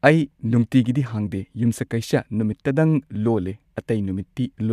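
No technical faults can be heard.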